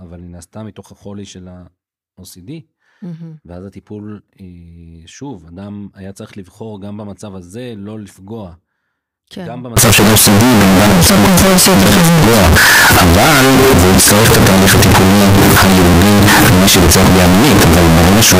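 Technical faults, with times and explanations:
9.77 s to the end (18.39 s), signed and unsigned mixed up: from this point the speech turns into a wall of loud, harsh distortion, and the quiet gaps between phrases are as loud as the voiced parts. This is likely 16-bit samples being read with the wrong signedness. That flips the top bit, so every zero crossing becomes a jump across the full range, and near-silent sections are as loud as the strongest parts.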